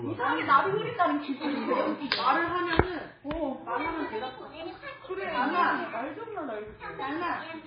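Throughout, the audio carries heavy MP3 compression damage, likely from an encode at a very low bitrate near 16 kbps. Nothing remains above 5 kHz, so the treble is gone, and starved frequency lines flicker frame to frame, giving a watery, swirly texture with smeared attacks.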